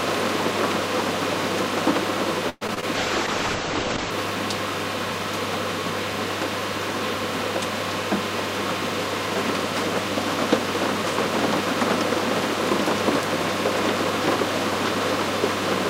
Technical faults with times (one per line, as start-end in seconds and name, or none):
2.49-2.84 repeated packet loss (robotic sound)
2.95-4.18 call bitrate drop